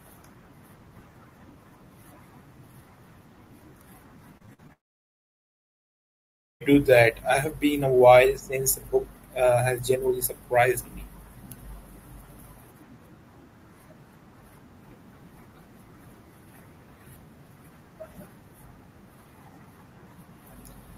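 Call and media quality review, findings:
Repeated packet loss (robotic sound), 4.37–4.71 s: choppy speech with a handful of short holes, the longest about 50 ms. Receiver concealment keeps extending the last frame across each hole. Roughly a third of the span is patched fill.

Long network dropout, 4.73–6.62 s: speech cuts out for about 1.9 s. A brief fading buzz gives way to near silence, and speech resumes with that stretch missing. Likely cause: stream interruption on the network path that exhausted concealment.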